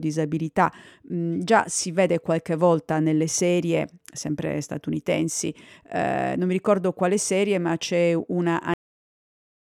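A cut-off end at 8.74 s truncates this speech clip: right after "serie ma c'è una" the sound stops mid-utterance and falls straight to digital silence, with no natural decay, holding there for about the last second until the file ends at 9.69 s. The final buffers of audio were never written out or played, so the phrase is sliced off abruptly rather than finishing or fading.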